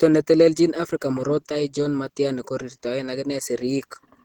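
From start to end the speech sounds hoarse, grainy and muffled, likely from Opus compression in hybrid mode, fitting a rate near 16 kbps. A spectrogram shows energy up to 20.2 kHz, with upper bands filled by smeared noise, not clean harmonics.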